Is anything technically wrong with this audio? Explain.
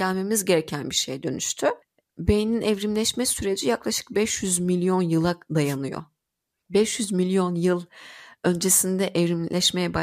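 Yes. At 5.63–5.77 s, just after "milyon yıla", a wireless microphone noise hit occurs: the FM radio link fades through reflection cancellation, so receiver noise surges into a brief static swish. It shows as a broadband vertical smear on a spectrogram and a ragged burst in the waveform.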